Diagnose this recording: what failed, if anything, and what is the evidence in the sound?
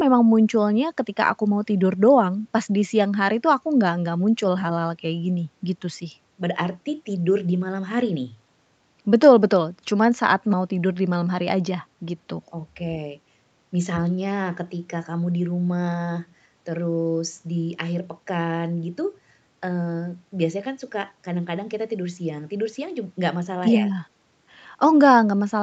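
Nothing has failed: the speech carries the expected marks of a call chain, with the lowest bass trimmed by the microphone processing and the content stopping at about 8 kHz, which fits an Opus call path running at its normal wideband setting.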